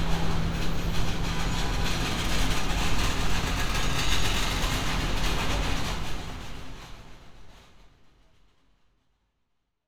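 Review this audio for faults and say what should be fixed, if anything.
Nothing stood out on listening, and the gentle fade-out over roughly the last four seconds is simply an edit, so nothing here needs fixing.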